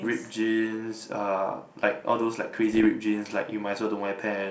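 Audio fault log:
2.73–2.87 s, bit errors on an ADPCM link: during this 0.14 s stretch, a low error rate of a few tenths of a percent flips bits in the G.722 stream. Each hit derails the decoder's step size and predictor, so pops and rough bursts ring on with brief level jumps.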